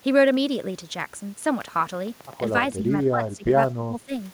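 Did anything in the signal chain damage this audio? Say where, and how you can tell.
Yes. From 1.68 to 2.59 s a train of clicks ticks over the speech, about seven evenly spaced pops at 7.8 per second, peaking roughly level with the speech itself. That regular, same-shaped pulsing likely points to interference on the analogue wiring or a struggling interface injecting repeated pulses.

Speech is suppressed in double talk in the call processing stage: the level sinks by up to about 15 dB between 2.71 and 3.54 s, then by up to about 25 dB from 3.75 to 4.13 s. The echo canceller likely mistook simultaneous talk for echo and attenuated both.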